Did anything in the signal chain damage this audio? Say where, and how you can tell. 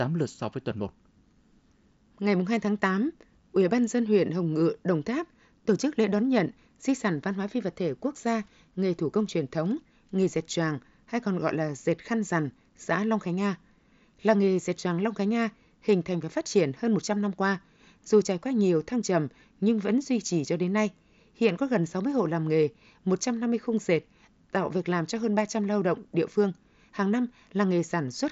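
No, nothing in the chain damaged this speech; the band stops at about 7.7 kHz, as expected from a Bluetooth mSBC headset link, and no stage adds a fault on top of that.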